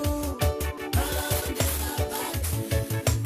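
A skip ahead at 0.77 to 0.92 s jumps the audio forward, losing well over half a second that was dropped while later audio waited, with the two sides joined almost seamlessly. A jitter buffer speed-up from 1.34 to 1.52 s runs the sound at 138% speed with unchanged pitch, as the receiver trims short pitch-period pieces, roughly 70 ms in total, to reduce its backlog.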